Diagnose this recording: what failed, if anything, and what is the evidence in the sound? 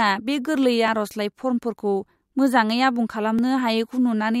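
The capture buffer likely overran, so dropped buffers of a few milliseconds were lost and the speech splices together, heard as small jumps at 0.88 and 3.39 s.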